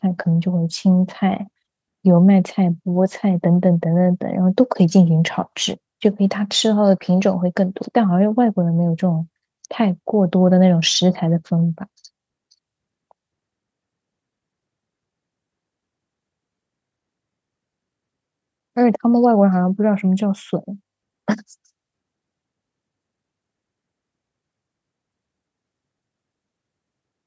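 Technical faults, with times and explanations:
No technical faults are heard; the call microphone processing trims only the lowest bass, which is normal.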